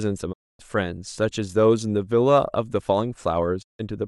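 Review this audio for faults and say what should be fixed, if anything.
Two digital broadcast dropouts here. The speech cuts out from 0.32 to 0.61 s, and again from 3.61 to 3.81 s, each time fading to silence over about 20 ms. The receiver lost good frames and muted until valid ones came back, so 256 ms and 160 ms of programme are simply missing. Those gaps fit runs of 32 ms frames. A stronger reception margin or better error protection on the link should prevent it.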